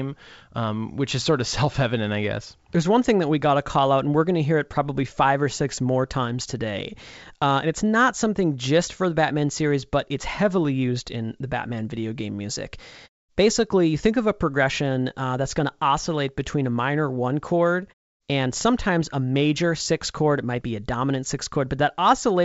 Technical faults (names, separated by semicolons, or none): none